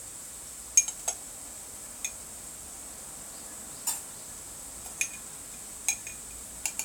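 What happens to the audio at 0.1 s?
Nothing goes wrong at 0.1 s: the sound plays through that moment intact, with no audible fault.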